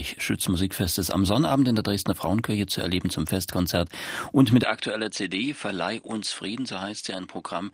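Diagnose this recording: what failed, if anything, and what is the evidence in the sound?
At 4.63 s the sound abruptly goes duller and drops about 5 dB, with nothing above 9.8 kHz and new background noise roughly 40 dB down. There's no gap. That points to the capture stage, likely an input switched to a poorer device.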